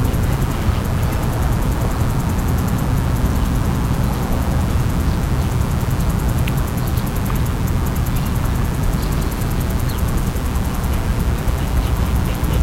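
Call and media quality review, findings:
Steady, raspy buzz under the sound for the whole clip, start to end. Fairly prominent, roughly 15 dB below the programme. Mains buzz on a 60 Hz supply. Probable source: dimmer, rectifier or unshielded cable. Sharp switching spikes twice per mains cycle, harmonics of 60 Hz up into the kHz range, giving the gritty edge rather than a pure hum.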